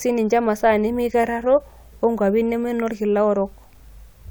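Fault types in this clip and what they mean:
No faults detected in the speech; nothing to report.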